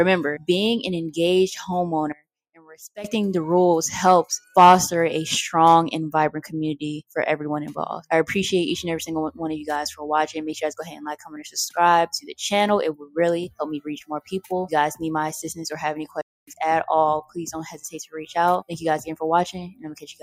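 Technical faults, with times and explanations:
2.55 to 2.74 s and 12.99 to 13.16 s, sound cut by the noise suppressor: the sound sinks by about 10 dB and then about 11 dB for roughly 200 ms and then 150 ms, because the noise suppressor mistook it for noise and pulled it down.
16.21 to 16.47 s, playback stall: the audio drops to silence for 262 ms in mid-flow before continuing, most likely because the player ran short of data or its thread was briefly blocked.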